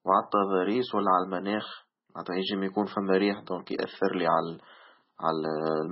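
Speech with heavy MP3 compression damage throughout: nothing above 5.6 kHz and a watery, swirling texture, likely from encoding at a very low bitrate, which fits roughly 16 kbps.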